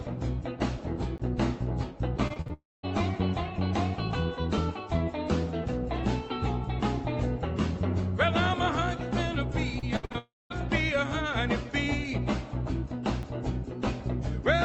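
At 1.18 s a block of digital silence about 15 ms long drops the output to silence and back with no fade.

From 2.27 to 2.51 s repeated packet loss leaves four short holes, the longest 41 ms. Concealment stretches the preceding sound across them, so roughly 41 percent of that stretch turns choppy.

Straight after, from 2.53 to 2.85 s, comes what is likely a long network dropout. About 300 ms never arrives, and the concealment buzz fades into about 200 ms of silence before the audio resumes further on.

The same sequence returns later. Repeated packet loss from 9.79 to 10.16 s breaks the sound into four gaps, the longest 67 ms, with nearly half the span patched, giving a choppy, stuttering texture. A likely long network dropout follows from 10.18 to 10.52 s, losing about 320 ms and leaving roughly 200 ms of silence.

At 13.23 s a second block of digital silence, only 5 ms, produces a brief tick.

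Throughout, the call path's Opus coding limits the top end to about 8 kHz, which fits a modest call bitrate.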